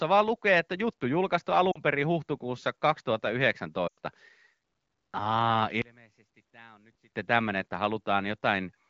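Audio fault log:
1.71–1.79 s and 3.87–3.98 s, lost AMR speech frames: After "lukee että juttu julkaistu" a 40 ms gap, which fits two missing 20 ms frames, comes through as a short smeared dip before "perin huhtikuussa". At 3.87 s a 100 ms loss, consistent with five frames, drops the sound to near silence within two frames, because the wideband decoder repeats its last pitch and vocal tract settings at decaying gain. The speech then returns briefly rough against otherwise clear HD Voice.
5.82–7.14 s, one channel inverted: The speech collapses by about 28 dB and leaves only a faint residue until just before "tämmöinen että". The likely cause is reversed polarity on one stereo channel, so the centred speech common to both sides cancels when they are summed to mono. Only the small difference between the channels remains audible, which is why the level drop is so deep and the remaining sound is so faint.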